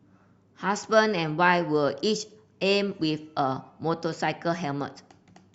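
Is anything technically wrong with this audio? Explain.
No, there are no faults.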